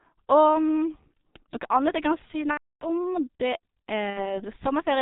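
The speech runs through the G.723.1 codec from start to end. Its muffled, hoarse tone and smeared consonants fit the 6.3 kbit/s mode. Nothing above 4 kHz survives. The damage is heavy.

VoIP packet loss concealed by the speech codec occurs from 2.51 to 2.86 s. The decoder repeats its last pitch and filter, so the sound stretches into a fading buzzy tone or coloured noise. This fits about 300 ms of lost frames. A shorter gap at 4.10 to 4.44 s fits about 60 ms lost, and the sound stays weak afterwards.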